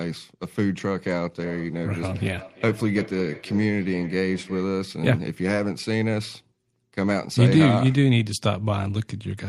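From 1.38 s to 4.82 s the speech picks up a feedback echo between two devices. Two endpoints on the same call sit within earshot, so one device's loudspeaker output is captured by the other's microphone and sent back, and neither echo canceller removes sound it did not itself play. Each word returns at a fixed interval of roughly 300 ms, at most about 18 dB below the speech. That steady, distinct repeat sets it apart from room reverberation, which smears continuously rather than repeating.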